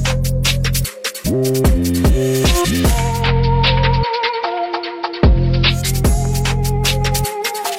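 At 3.07 s the sound cross-fades over about 214 ms into a duller, hissier version. This is digital radio blending to analogue. The receiver lost its digital stream and fell back to the station's AM broadcast. AM's narrow bandwidth takes away the treble. A faint hiss sits well below the signal. The level shifts by about 2 dB. At 5.91 s it blends back to the clearer digital sound.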